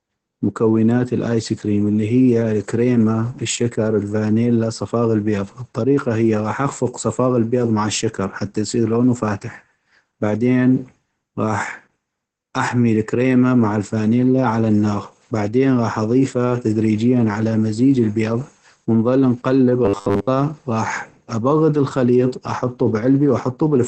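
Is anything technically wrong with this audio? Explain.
Yes, there are two faults: low-bitrate voice compression throughout and a short robotic stretch near the end.

Opus voice compression runs throughout this speech clip. At about 12 kbps the encoder stays in its SILK linear-prediction mode with a wideband setting, so nothing above about 8 kHz survives and the excitation is coded coarsely. The result is muffled, slightly hoarse speech with a faint synthetic edge. Unlike a simple low-pass filter, the damage also roughens the voice's texture, not just its brightness.

From 19.85 to 20.28 s there is robotic sound from repeated short buffers. This is likely caused by audio arriving too slowly, with playback looping the most recent slice while most of the real signal in that span is dropped. The loop imposes a rigid 100 Hz buzz, which fits a 10 ms buffer. Unlike the codec's diffuse roughness, this buzz has one fixed pitch.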